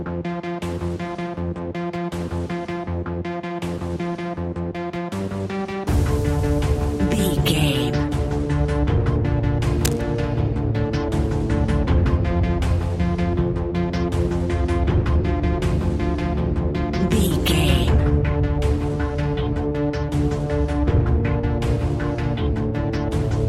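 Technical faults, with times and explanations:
9.81–10.03 s, cable scratch noise: for about a fifth of a second, a dense, irregular crackle sits over the sound at roughly 10 dB below it, heard as a brief scratching or rustling texture. The likely cause is a worn cable, connector or control being moved, so that its contact resistance changes rapidly. Each change modulates the signal path and injects uneven bursts of broadband noise, which is why the disturbance sounds gritty rather than tonal.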